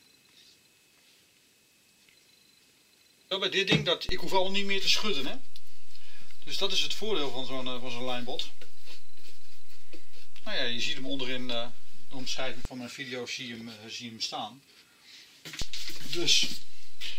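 A DC step at 4.09 s shifts the waveform's zero line by about -22 dBFS, giving a low thump, and it releases with another at 12.65 s. A second step at 15.62 s holds to the end.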